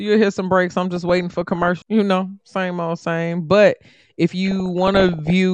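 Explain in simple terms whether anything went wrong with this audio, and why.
Yes, there is DAB burbling in two stretches of this speech: 0.96 to 1.81 s, right after "hear some breaks I'm", and 4.46 to 5.30 s. Weak digital radio reception let corrupted data through, so small slices of the sound jump about, giving short blips of noise rather than the clean silent gaps of a dropout.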